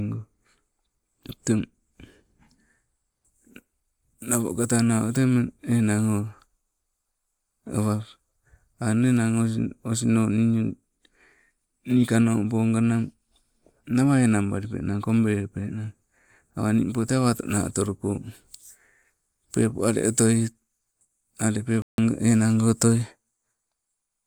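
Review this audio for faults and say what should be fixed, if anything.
At 21.82 s the speech cuts out for about 160 ms, a playback stall, likely the player starving for data or its thread getting blocked. A bigger playback buffer and keeping that thread unblocked should fix it.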